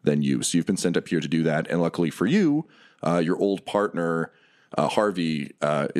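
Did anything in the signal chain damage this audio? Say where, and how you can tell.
No, nothing in the signal chain has damaged this speech recording. No stage, from the wiring and converter through to storage and playback, leaves any audible mark on it.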